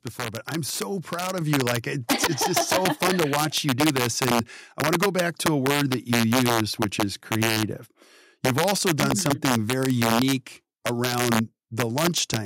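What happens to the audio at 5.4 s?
Sharp, violent cracks break out on the loudest peaks of the speech around 5.4 s, harsher and more abrupt than ordinary clipping. This is integer overflow, and it runs through the whole clip rather than only at that moment. The signal is driven about 2 dB past the largest value the integer format can hold, so the small fraction of samples that exceed it wrap around to the opposite extreme instead of being held at the limit.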